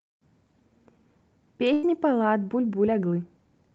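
At 1.73 s the speech drops out in a burst of packet loss that lasts until 1.85 s. For about 95 ms the receiver fills the hole by extending the last received sound and fading it down, so it comes across as a smeared, decaying tail. Speech then resumes with about 100 ms of material missing, which makes an audible skip. The surrounding call audio, band-limited to about 8 kHz, points to Opus coding.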